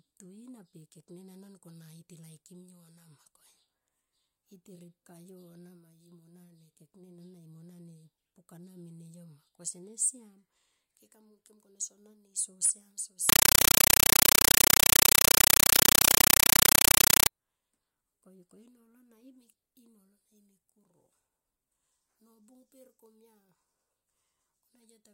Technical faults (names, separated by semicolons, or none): compressed stream played as audio